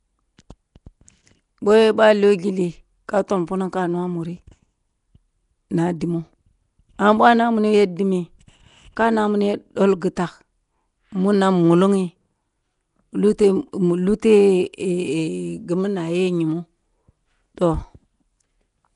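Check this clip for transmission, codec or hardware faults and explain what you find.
One codec fault runs through the entire speech clip. Nellymoser compression is the likely cause. Sparse bits leave weak bands filled with noise, giving a rough, smeared, hissy sound with nothing above 10.6 kHz.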